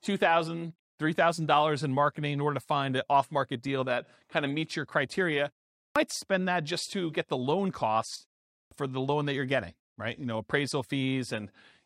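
The output device drops into a low-power state during short silences and wakes too slowly, causing a clipped start after a pause: after "of meets your criteria" and a 0.33 s gap, 137 ms vanishes at 5.82 s, and after "get the loan costs" another 144 ms goes at 8.57 s, so the next word bursts in abruptly.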